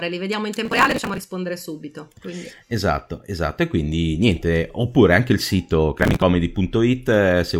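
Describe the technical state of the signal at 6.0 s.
At 6.0 s the signal is in a burst of processor overload crackle running from 6.00 to 6.22 s. The processor repeatedly misses its deadlines for buffers of around 5 ms, and each missed buffer is skipped, leaving many abrupt splices with hard edges. It is heard as a gritty, crackling tear over the speech. On a waveform the stretch shows jagged discontinuities; a spectrogram shows dense vertical broadband streaks across the span.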